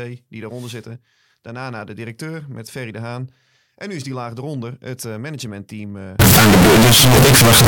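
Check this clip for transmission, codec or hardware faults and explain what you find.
One fault is present, near the end of the clip. From 6.2 s to 7.7 s, right after "het uh managementteam eh", the audio turns into very loud, harsh distortion, most likely from signed and unsigned samples being mixed up, which fits 16-bit audio read with the wrong sign convention. Flipping the top bit makes every zero crossing leap across the full range. Unlike ordinary clipping, quiet stretches become as loud as everything else.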